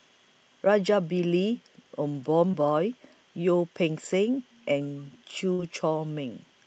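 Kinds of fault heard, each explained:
Short concealed packet loss: At 2.51 to 2.55 s, a sliver of audio reached the decoder too late. The receiver stretched the preceding sound for 16 ms, then blended back. It shows as a brief smear, with 20 ms of real audio lost.
Burst of packet loss: From 5.53 to 5.60 s, several consecutive packets went missing. The receiver extended the last sound for 55 ms, fading it as the gap continued. Then audio resumes further on, skipping 60 ms of real signal.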